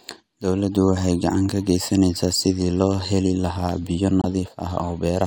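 It's a speech clip with a corrupt frame muted at 4.22 to 4.26 s: a single damaged compressed frame got rejected by the decoder and the player dropped in silence, so there's a sharp-edged 42 ms hole, about one frame long, with the timing around it intact.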